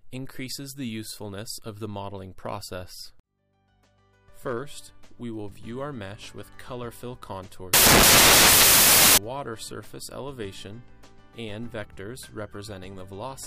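From 7.74 to 9.18 s the audio turns into loud, full-band hiss: samples built from the wrong bytes. The reader has misassembled each sample's bytes, whether by a one-byte offset, swapped byte order or a wrong alignment assumption, so the rapidly changing low-order bits land in the most significant position. Unlike clipping or heavy distortion, which still follow the original's shape, this replaces the sound with harsh broadband noise.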